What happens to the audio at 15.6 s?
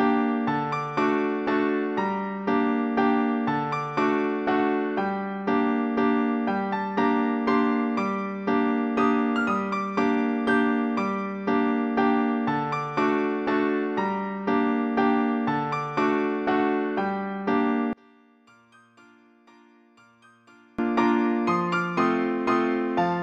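Nothing goes wrong at 15.6 s; the audio continues intact through that moment, with no dropout, click or other fault.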